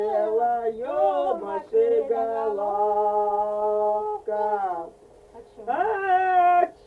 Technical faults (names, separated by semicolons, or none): none